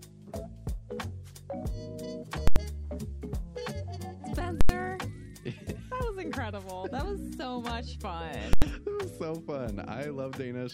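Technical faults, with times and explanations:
2.48–2.56 s, 4.61–4.69 s and 8.53–8.62 s, invalid numbers at full scale: in each case a calculation produced infinite or invalid values, which were forced to the largest possible number. The output jumps to one extreme and stays flat there, far beyond the audio's peaks, for about 85 ms, which fits a 4096-sample processing block. Each event sounds like a very loud pop at the block's edges with the sound gone between, or like a single bang.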